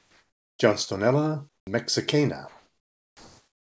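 From the start to 0.59 s, the background is replaced by comfort noise: a smooth, featureless hiss about 4 dB quieter than the real background. This likely comes from discontinuous transmission, where the sender went silent and the receiver synthesised noise to fill the gap. On a spectrogram this stretch is an even, grainy wash with none of the fine texture of the real background. The waveform is a flat band of uniform low-level noise.

From 1.49 to 1.67 s, comfort noise fills the background again, this time about 28 dB down. The waveform drops to near silence, and the spectrogram shows a faint, structureless haze.

Inside that gap, the onset is clipped by the voice detector: the 50 ms from 1.62 to 1.67 s, where the returning sound begins, were likely never sent because the detector reacted late. The sound therefore jumps in without its soft rise. The waveform shows a hard step from the near-silent band straight to the returning sound, and the spectrogram shows a vertical edge where the energy appears all at once.

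From 2.48 s to the end, comfort noise covers the background once more, only about 1 dB below the real level. It is a subtle swap that can be heard as the background losing its detail and becoming a steady hiss. Throughout the clip, the call path's codec leaves nothing above 8 kHz, which fits a wideband codec such as G.722.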